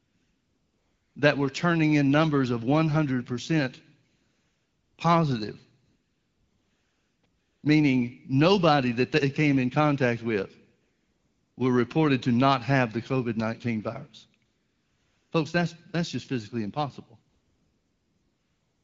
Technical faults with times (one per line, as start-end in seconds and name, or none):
0.00-1.15 AMR comfort noise
4.09-4.97 AMR comfort noise
5.85-7.63 AMR comfort noise
10.81-11.57 AMR comfort noise
14.45-15.31 AMR comfort noise
17.29-18.83 AMR comfort noise